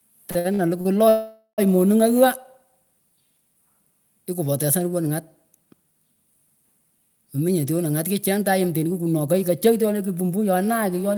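From 0.31 to 0.87 s there are repeated stalls (stutter): four short gaps, the longest 58 ms, total 175 ms. Late packets emptied the jitter buffer, so the receiver stretched the last sound each time. The speech drags and hiccups, and the spectrogram shows smeared, repeated frames.

At 1.09 s a call audio freeze begins and lasts until 1.60 s. For 490 ms the last sound is held as a fading buzz, ending in 70 ms of silence. The likely cause is delayed packets draining the jitter buffer. The waveform shows a decaying flat stretch.

From 7.48 to 10.45 s a jitter buffer speed-up plays the speech at 109% speed, trimming about 0.3 s in small pitch-period cuts. The pitch stays unchanged but delivery sounds hurried. The spectrogram shows harmonics at normal spacing, with syllables compressed closer together in time.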